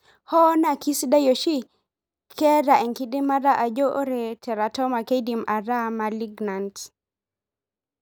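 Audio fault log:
No audible technical fault anywhere; nothing breaks into or alters the speech signal.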